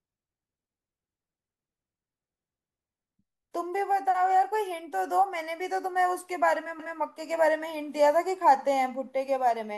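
At 6.79 s the speech briefly stutters, and a 200 ms stretch ending at 7.00 s is heard twice in a row. This is an overlapping chunks fault. The audio was handled in blocks of about 4.0 s, and the next block began before the previous one had finished. The tail of one block and the start of the next therefore both play, so that fifth of a second doubles. The join comes across as a hiccup or click.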